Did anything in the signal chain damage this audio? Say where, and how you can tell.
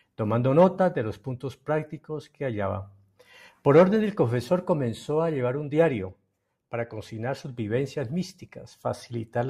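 Yes. Between 2.91 and 3.24 s the sound is cut by the noise suppressor, a call-processing stage. For about a third of a second the level sinks by about 12 dB while the signal stays present. The suppressor mistook this stretch for background noise and attenuated it. A network dropout or codec gap would leave silence or a glitch, and a compressor would duck the audio after a loud onset rather than pulling down this one stretch.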